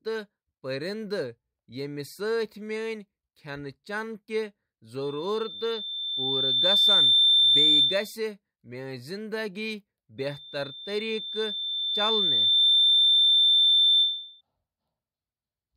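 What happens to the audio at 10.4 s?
At 10.4 s a loudspeaker feedback squeal is underway, running from 10.18 to 14.41 s. The microphone re-captures its own loudspeaker output, and loop gain above unity at 3.6 kHz lets that tone swell over roughly three seconds to about 10 dB above the speech.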